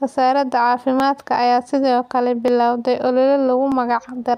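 Dropped samples at 1.0, 2.48 and 3.72 s in this speech recording: each is a single sharp click, likely where under a millisecond of samples went missing and the waveform jumped abruptly.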